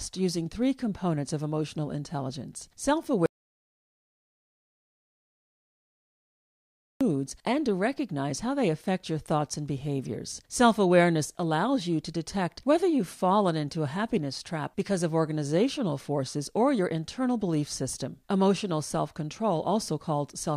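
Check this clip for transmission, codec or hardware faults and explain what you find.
One fault stands out, an audio dropout to silence from 3.26 s to 7.01 s, about 3.75 s lost. Speech cuts off mid-flow and returns at "and to recognize how". The input was likely disconnected or muted while recording continued writing silence. The waveform shows a flat line, and the spectrogram is a blank band with no room tone.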